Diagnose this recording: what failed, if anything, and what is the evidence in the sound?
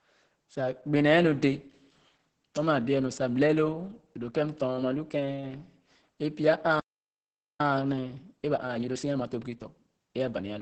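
The fault lies in the codec stage: Opus voice compression in its SILK mode. The entire clip has nothing above 8.7 kHz, and the speech sounds muffled, hoarse and faintly robotic. That coarse excitation, unlike a plain low-pass filter, points to heavy coding at a bitrate near 10 kbps.

At the playback stage, a playback stall silences the speech mid-flow from 6.80 to 7.60 s, a gap of about 0.8 s. The player's buffer likely ran dry.

Time-compressed catch-up follows, from 7.60 to 10.52 s. The player clears its backlog by cutting and cross-fading small slices, so speech runs at 1.25 times normal speed. Because pitch stays unchanged, this is not a sample-rate mismatch.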